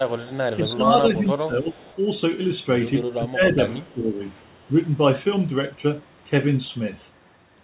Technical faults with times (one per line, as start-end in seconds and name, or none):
0.25-0.37 echo leak
0.55-1.85 speech suppressed in double talk
1.79-1.97 echo leak
3.03-4.20 speech suppressed in double talk